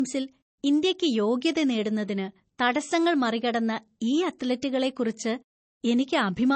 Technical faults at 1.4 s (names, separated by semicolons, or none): low-bitrate audio saved at a high bitrate